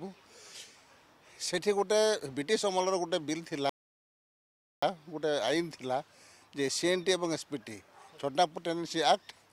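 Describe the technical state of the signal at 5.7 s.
At 5.7 s the signal is intact, with no dropout, distortion, glitch or other technical fault audible at that point.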